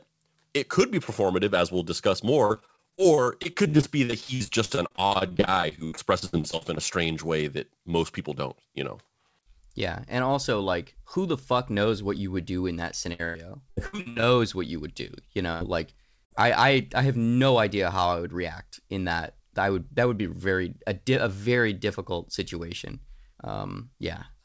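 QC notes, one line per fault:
2.46–6.79 s and 13.13–14.26 s, repeated packet loss (robotic sound): packets kept going missing or arriving late, and the receiver patched each hole by extending the last sound. The first stretch, from after "performative as we'll discuss" to "strange way that most", has around fifty short gaps of up to 75 ms, with about 30% of it concealed. The second, from "would do in that" to "what you would do", has nine gaps of up to 95 ms, with about 39% concealed. Both sound choppy, with pieces of the speech missing.
15.53–15.63 s and 16.25–16.32 s, burst of packet loss: a short run of packets was lost each time, about 80 ms and then about 60 ms. The receiver filled each gap by continuing the last sound and fading it down, so there is a brief held buzz or fading hiss before the audio jumps ahead with that slice missing. The first burst falls just before "like I I I". 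All of this sits within a call-codec band that stops at 8 kHz, which fits G.722.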